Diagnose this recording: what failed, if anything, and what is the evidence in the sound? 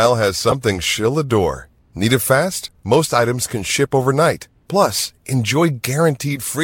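A corrupt frame was decoded at 0.48 to 0.53 s, just before "she'll adore". It is a codec-stage fault. A short, loud error burst peaking around -5 dBFS lasts about 50 ms, and roughly 20 ms of speech is lost. Flipped bits in a few compressed frames made the decoder misread gains and spectral codes, so it placed energy at the wrong frequencies for the length of the damaged frames rather than muting or concealing them.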